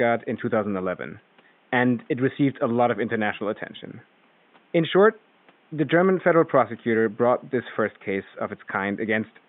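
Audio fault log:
No fault is heard in the audio.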